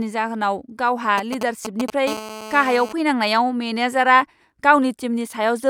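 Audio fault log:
1.18 to 1.90 s, GSM signalling bursts: a galloping dit-dit-dit of short 217 Hz buzzes, about 5 dB below the speech, from a nearby 2G phone's short radio bursts being rectified in the audio circuit. The spectrogram shows clustered vertical stripes repeating near 217 times a second; the waveform shows grouped spikes.
2.07 to 2.93 s, GSM phone buzz: a hard, raspy buzz at 217 Hz, about 12 dB below the speech, as a phone in a call pulses steadily and the circuit rectifies each burst. The spectrogram shows a dense comb of harmonics stacked on 217 Hz; the waveform shows regular sharp pulses.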